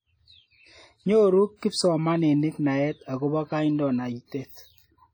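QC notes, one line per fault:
throughout, WMA compression: the speech rings and smears, with a washy hiss that swells and fades along with the signal, and detail sounds heavily degraded. This is likely a low-bitrate transform codec, around 32 kbps, spreading quantisation noise over long blocks and zeroing weaker components.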